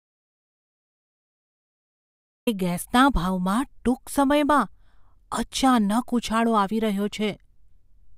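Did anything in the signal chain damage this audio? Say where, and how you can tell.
Yes. The clip opens in an audio dropout to silence that is already under way at 0.00 s and lasts until about 2.47 s, when the speech starts abruptly mid-flow. The gap is silent, with no room tone or noise floor beneath it, so the input itself was missing while the recorder kept writing empty samples. That points to the capture end of the chain, most likely a disconnected input device, a failed link or a mute. Whatever was spoken in that stretch is gone.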